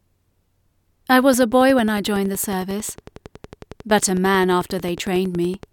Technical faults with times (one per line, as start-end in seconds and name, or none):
1.34-5.64 train of clicks